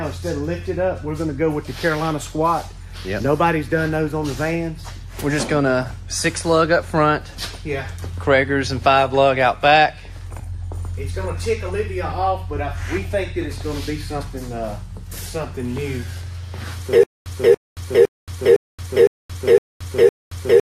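From 17.03 s to the end, the audio falls into a stutter with silent gaps: a 283 ms fragment repeats seven times, each followed by about 226 ms of digital silence, every 509 ms. This is likely a stalled stream replaying its last buffer.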